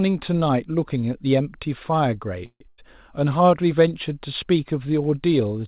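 At 2.46 s the audio stalls for about 0.16 s, until 2.62 s, which sounds like a call audio freeze, likely from packets held up in transit so the jitter buffer ran dry. The last sound is stretched into a buzz or hiss that dies away, and about 60 ms of it is true silence. Nothing is lost; the audio simply resumes 143 ms late. On a spectrogram the final frame's spectrum smears flat and fades, then a blank strip appears before normal texture returns.

Just after, from 2.68 to 2.80 s, comes a burst of packet loss. Roughly 100 ms of audio never arrived, and a gap of about 96 ms was papered over by repeating the preceding sound at falling level, heard as a brief held buzz or hiss that fades. Playback then jumps ahead, so that stretch is gone. The waveform shows a short, decaying patch ending in an abrupt change of shape. On the spectrogram, as elsewhere, the energy stops at 4 kHz, consistent with the G.711 call path.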